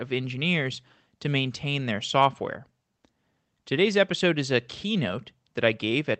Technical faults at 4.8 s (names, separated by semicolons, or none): none